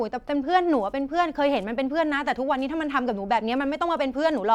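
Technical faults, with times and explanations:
No technical faults can be heard in the speech. There is nothing to give a time or an explanation for.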